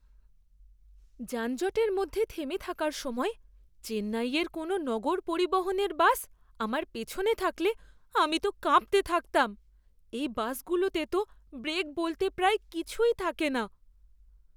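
No dropouts, clicks, distortion or other transport or processing faults can be heard anywhere in the recording.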